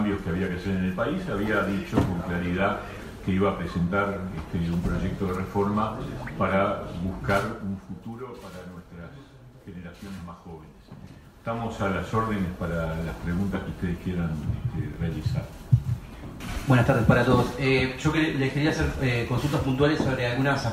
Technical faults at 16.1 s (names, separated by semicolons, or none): none